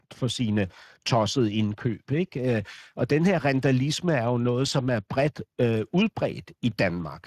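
Speex codec damage runs throughout the speech: starved CELP excitation leaves it hoarse and noisy, with a noise-like upper band, consistent with a middle setting near 22 kbps.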